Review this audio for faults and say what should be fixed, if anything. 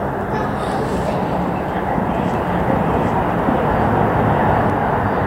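A doubled audio track runs from 2.34 s to 4.70 s. A second, full-band copy trails by about 0.7 s, at roughly equal level. It has no decay and starts and stops abruptly. Likely cause: a slower second capture path or misaligned edit. Route each source through a single capture path and check edits for overlapping copies.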